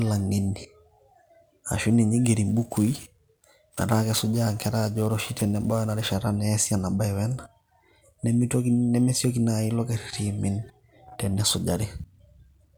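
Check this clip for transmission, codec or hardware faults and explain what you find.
One hardware fault is present. From 2.49 to 6.15 s, the speech takes on a gritty hiss that swells on loud and bright sounds and disappears in pauses. This is sample clock jitter. The converter's unstable clock, wandering by around ten microseconds, samples at slightly wrong instants, producing error roughly 20 dB below the signal.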